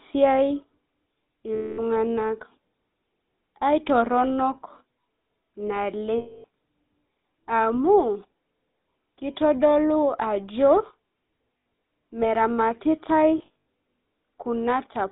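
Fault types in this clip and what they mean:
GSM full-rate codec, throughout: pulse-excited vocal-tract modelling squeezes speech into roughly 200 Hz to 3.7 kHz, leaving plainly audible buzzy, gravelly roughness.
Lost GSM frames, at 1.55–1.81, 6.18–6.45, 11.58–11.82 and 13.38–13.66 s: the last good frame repeats, giving a rough metallic ring, broken into short bursts in the last two.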